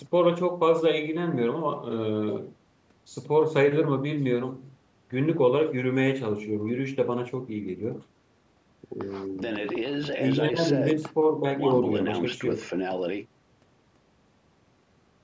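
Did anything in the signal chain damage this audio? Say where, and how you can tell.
No, nothing in the chain damaged this speech: the drop to silence in the pauses is the call's normal gating, and the missing energy above 8 kHz and lowest bass are the call microphone processing doing its job.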